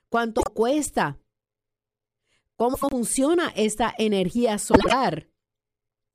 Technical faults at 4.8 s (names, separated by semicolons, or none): frames out of order